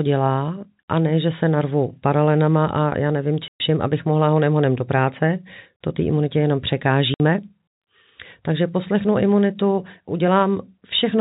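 At 3.49 s the speech drops out completely for 120 ms. At 7.14 s a second gap of 60 ms follows. Both are packet loss filled with silence. Packets never reached the receiver, and it played nothing in their place. Both gaps are whole multiples of 20 ms, which fits a 20 ms packet. The edges are abrupt. The narrowband G.711 telephone coding carries nothing above 4 kHz.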